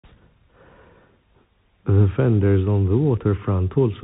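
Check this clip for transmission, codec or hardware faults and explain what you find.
One codec fault runs through the whole clip.

Bluetooth CVSD headset codec, throughout: one-bit delta coding with an adaptive step cuts everything above 3.8 kHz, makes s sounds scratchy, and leaves granular hiss beneath the speech.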